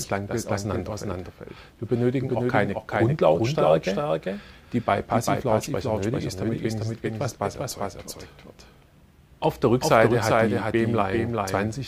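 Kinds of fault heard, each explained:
Doubled audio track: throughout the clip, every sound returns as a second full-band copy roughly 0.4 s later and a few decibels quieter, around 5 dB down. The copy has no decay or room colour, so it reads as a clean, out-of-step duplicate rather than an echo. The likely cause is the same signal reaching the mix twice, once directly and once through a slower capture path or misaligned edit.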